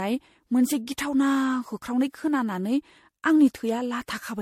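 Speech, and it's swirly, smeared and hollow all the way through, with nothing above about 16.6 kHz and consonant attacks blurring into each other. That's more mush than a single MP3 pass should give, so it's likely generation loss: the audio decoded and re-encoded around five times, which fits an MP3 chain at 64 kbit/s. Each pass lands on a shifted frame grid and quantises again, so the noise and spectral holes keep stacking up.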